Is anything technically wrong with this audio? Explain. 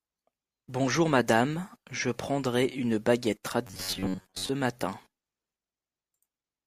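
Yes. From 3.67 to 4.50 s, after "je prendrai une baguette", audio likely arrived too seldom, so a roughly 11 ms buffer was looped. The result is robotic sound from repeated short buffers, a rigid 93.8 Hz metallic buzz.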